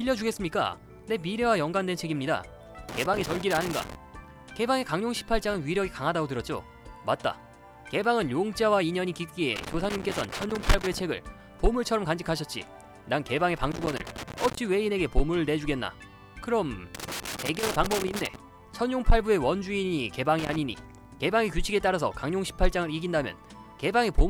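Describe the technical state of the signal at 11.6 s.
At 11.6 s the signal is intact, with no audible dropout, distortion, glitch or other technical fault at that moment.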